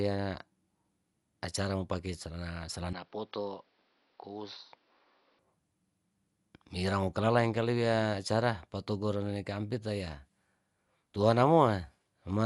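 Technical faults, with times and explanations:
Throughout: Dolby Digital compression, likely. Nothing comes through above 11.5 kHz, and the top end sounds dull with a rough, fluttery haze around voiced sounds. That's what happens when the encoder leaves many frequency lines unfunded and the decoder fills them with noise, which fits about 64 kbps.
2.93 to 5.39 s: input switched to a poorer device, likely. The band suddenly stops at 5.9 kHz and the speech drops a few dB and turns boxy, with a fresh noise floor roughly 40 dB down. There's no gap at either switch.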